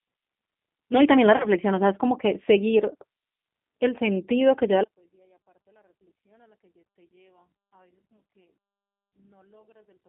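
The clip is speech, and it sounds like it has passed through a G.729 codec for its whole length. The band is narrow, running from about 200 Hz to 3.6 kHz, with nothing above that. The codec damage is plainly audible. Speech sounds rough and a little synthetic, which fits an 8 kbit/s codec that rebuilds each short frame from a vocal tract filter and a few pulses. At 1.37 s there is VoIP packet loss concealed by the speech codec. About 30 ms of audio went missing, which points to a single lost packet. The decoder filled the gap by stretching its last pitch and filter, so the sound turns briefly into a buzzy tone or coloured noise that fades. The disturbance lasts until 1.47 s, because each new frame still builds on the guessed one before it. From 4.84 s to the end, the level collapses by about 39 dB, and the speech almost disappears. The likely cause is one channel inverted. If one stereo channel has reversed polarity, anything common to both channels cancels when they are summed to mono. 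A centred voice is exactly that kind of common content, so only a faint remnant of the difference between the channels is left.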